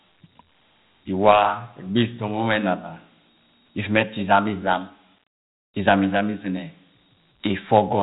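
Dialogic VOX ADPCM throughout this speech clip: 4-bit adaptive coding, likely around 32 kbps, leaves nothing above 3.9 kHz and a plainly audible gritty hiss trailing the speech.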